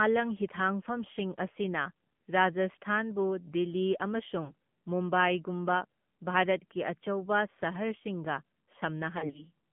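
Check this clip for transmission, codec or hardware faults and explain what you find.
Two faults are present: mobile-codec coding throughout and two bursts of lost frames.

AMR narrowband mobile codec, throughout: the low-rate vocal-tract model, consistent with about 7.4 kbps AMR-NB, confines the speech to roughly 150 Hz to 3.4 kHz and leaves it plainly buzzy and synthetic.

Lost AMR speech frames, 4.44 to 4.53 s and 9.18 to 9.45 s: failed frames force the decoder to repeat its last settings at falling gain. The first gap is 40 ms, fitting two frames. The second scatters 80 ms of losses across about 160 ms, in runs no longer than 40 ms.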